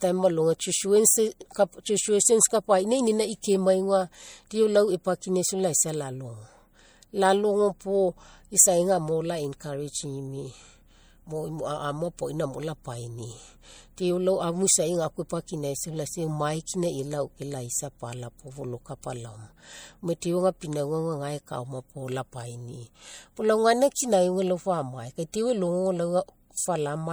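From start to finish the speech has a watery, swirly quality with smeared consonants, most likely MP3 compression. The damage is plainly audible and fits a 64 kbps encode. Weak frequency lines flicker on and off between frames, although content still reaches about 21.2 kHz.

At 25.32 s there's a pre-echo. A sharp attack landed late in a transform block, so the codec's noise, sized for the loud part, spread about 14 ms back into the quiet just before it. You hear a brief hiss ahead of a softened onset.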